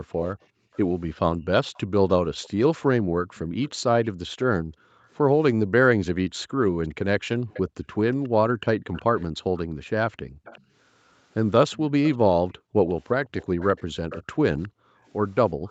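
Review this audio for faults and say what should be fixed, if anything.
A faint delayed copy of the speech runs from 0.23 s to the end. It trails the live speech by 362 ms at about 20 dB below it. This is likely an echo leak: the far side's echo canceller let loudspeaker pickup through. Fix the far end's echo cancellation or use a headset.

The room background dips as the echo canceller gates the microphone. This happens at 0.5 to 0.72 s (about 26 dB), through 3.0 to 10.44 s, and through 12.49 to 15.67 s, where drops reach about 40 dB. The dips add up to about 200 ms, 1.5 s and 0.7 s in these spans. Gentler suppression with comfort noise would prevent this.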